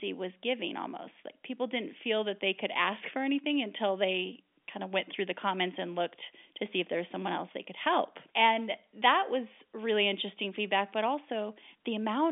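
No faults are present; the speech arrives over G.711 telephone coding at 64 kbps, confined to a line band of roughly 200 Hz to 3.6 kHz with nothing above 3.7 kHz, and the coding leaves at most a faint trace on the signal.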